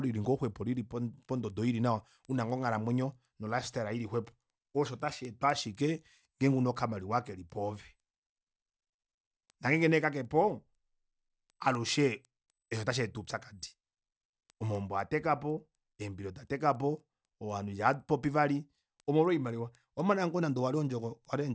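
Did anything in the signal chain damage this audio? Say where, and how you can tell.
Yes. The damage happens at sample-rate conversion, where the resampler restarted on every block. Steady 4.0 Hz ticks, one every 250 ms, run through the speech only while signal is present. Each block was converted without its neighbours' samples, so every block edge carries an error. This likely points to a 44.1 kHz to 16 kHz conversion.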